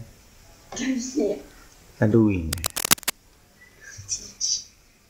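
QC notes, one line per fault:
2.12 to 2.14 s and 4.45 to 4.48 s: corrupt frame decoded. A single damaged compressed frame was played at each point, its misread codes throwing energy into wrong frequencies for about 25 ms, heard as a short chirp or blip. On a spectrogram, a narrow vertical smear of misplaced energy; the first peaks near -15 dBFS, the second near -20 dBFS.
2.53 to 3.10 s: cable scratch noise. Dense, uneven bursts of scratching and rustling sit over the sound for just over half a second, at about the same level as the signal, likely from a worn cable or connector being moved. The waveform shows jagged spikes; the spectrogram, broadband speckle.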